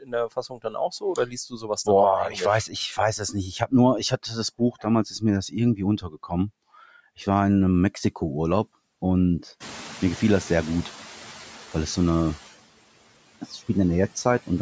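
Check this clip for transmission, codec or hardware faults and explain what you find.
What you'll hear here comes from the noise suppressor rather than the transmission path, codec or hardware. Speech cut by the noise suppressor shows up at 0.0–1.88 s, 2.29–6.32 s and 13.41–13.69 s. The suppressor mistakes quieter speech for noise and dips it by about 19, 18 and 11 dB, so parts of the speech sound swallowed or faint. Around 9.5 s the room noise jumps by about 20 dB, and from 9.6 to 10.96 s you get the noise suppressor catching up. Its noise estimate lags, so the background comes through with only about 5 dB of reduction, then sinks as the estimate settles over 1.36 s.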